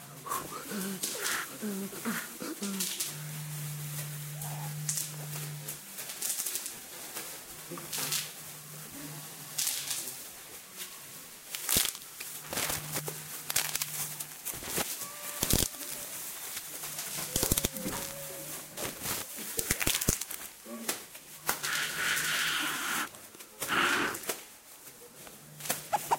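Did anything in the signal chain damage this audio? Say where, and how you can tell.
Yes: compressed frames skipped at 5.97 s and 15.74 s. Whole 26.1 ms codec frames go missing, so the sound jumps ahead through a brief smeared blip.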